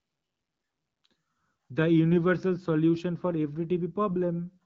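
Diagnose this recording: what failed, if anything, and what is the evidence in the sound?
Two brief bursts of AMR bit errors at 2.12–2.18 s and 4.08–4.14 s: the speech turns scratchy and gargly but holds pitch and level. Each fits about three AMR-WB frames, where a weak network link flipped a few percent of less protected bits, misplacing the decoder's pulses.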